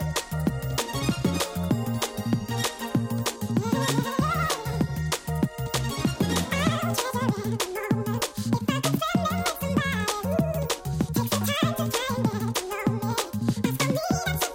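From start to end, the audio is read two samples at a time: pairs are taken as one frame, so everything plays at double speed, an octave higher.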